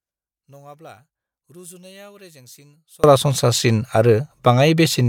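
From the start to 3.04 s, the speech nearly disappears when the channels are summed to mono. It drops by about 31 dB. What remains is a faint trace. The likely cause is one channel inverted: one stereo side has its polarity flipped. The centred speech is shared by both sides, so it cancels. Only the small difference between them survives. After 3.04 s the speech returns at full level.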